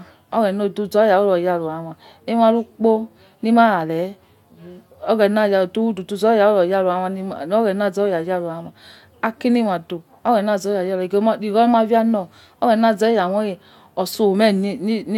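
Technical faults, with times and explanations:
No technical faults heard anywhere in the speech.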